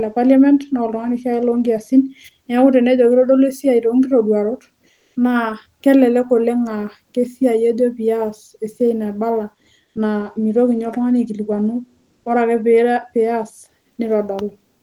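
At 4.93–5.15 s, 9.85–9.95 s and 12.17–12.25 s, comfort noise replaces the faint background with a steady, featureless hiss, likely from the sender's discontinuous transmission during speech pauses.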